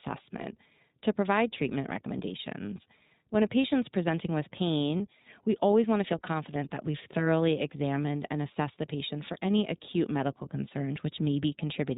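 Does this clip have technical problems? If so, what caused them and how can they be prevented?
Yes. The whole recording carries the sound of the iLBC codec, a narrowband VoIP coder. Every frame's excitation is coded independently, and the roughness is plainly audible, which fits its 15.2 kbps, 20 ms mode. The speech is clear but slightly harsh and synthetic, with a thin, boxy tone because nothing above 4 kHz survives. On a spectrogram, energy stops abruptly at a flat 4 kHz ceiling for the full clip. To prevent this, carry the call with a wideband codec such as Opus or G.722.

There are also lost iLBC frames at about 4.98 s, where a single 20 ms packet went missing. The decoder filled the gap by repeating the last pitch cycle blended with noise, so it sounds like a brief buzzy, breathy hold on the vowel. Because each iLBC frame stands alone, the speech snaps back immediately afterwards. 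In the waveform, a short stretch of copied, periodic cycles appears. On a spectrogram, a thin slice shows frozen harmonics with added noise. To prevent this, reduce packet loss with a steadier network path, a larger jitter buffer, or forward error correction.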